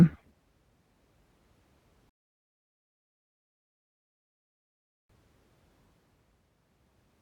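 At 2.09 s the speech drops into silence for 3 s, then picks up at 5.09 s exactly where it broke off. That is a rebuffering stall: playback outran the downloaded audio and waited for more data. No speech is lost, but three seconds of dead air are added.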